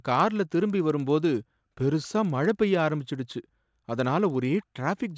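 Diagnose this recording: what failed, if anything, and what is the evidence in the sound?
A resampler restarted on every block has failed at the sample-rate conversion stage. A steady tick runs through the whole speech at 20 per second, one every 50 ms. It sits on the signal and drops away in the gaps. The 50 ms spacing fits a block-based converter, likely going from 48 kHz down to 16 kHz. Each block is converted alone. The filter has no real neighbouring samples at the edges, so every boundary leaves a small error.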